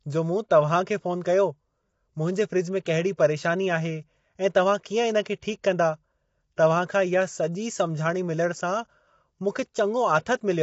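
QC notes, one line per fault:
Throughout, low-delay AAC compression: rough, grainy speech with noise between harmonics, and a spectrogram empty above 7.7 kHz, likely from AAC-ELD's short frames at a low bitrate.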